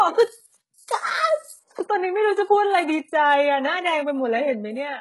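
Speech, and it's been through a low-bitrate codec pretty hard. The whole clip has that HE-AAC compression character, heavily damaged: nothing survives above about 11.5 kHz, and what treble there is sounds synthetic. The likely cause is spectral band replication, where the upper band isn't coded at all but patched in from copies of the lower spectrum under a rough envelope. The harmonics don't line up across the join, so sibilants come out gritty and a bit lispy. The sound points to a bitrate somewhere around 12 kbps. There's also a pre-echo from 0.73 to 0.76 s. A short hiss of about 31 ms creeps in ahead of a sharp attack, and the onset itself sounds softened and smeared. That's the transform block spreading its quantisation noise across the quiet stretch before a transient that landed late in the block, so noise meant for the loud part leaks out early.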